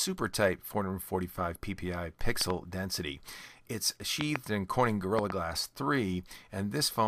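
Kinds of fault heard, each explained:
Loud pop: Three times, at 2.41 to 2.52 s, 4.21 to 4.38 s and 5.19 to 5.32 s, a pair of sharp pops lands on top of the sound, which carries on uninterrupted underneath. The first pair peaks about 15 dB above the signal and the later two about 20 dB above it. The likely cause is a voltage pulse from a plug, switch, static or driver glitch. A dropout or glitch in the signal itself would break the sound instead.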